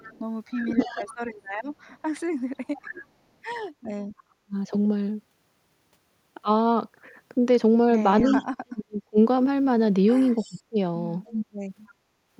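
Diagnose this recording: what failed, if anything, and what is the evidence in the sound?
A delayed copy of the speech, about 0.3 s behind and faint to fairly strong, trails it at 0.0–1.15, 2.76–4.23, 8.23–8.43 and 10.39–11.92 s: likely an echo leak from incomplete echo cancellation in call processing.

The speech dips deeply or drops out in pieces at 0.53–1.03, 2.57–4.56 and 8.34–10.77 s: likely speech suppressed in double talk, when the echo canceller turned down its own talker along with the loudspeaker echo during overlapping talk.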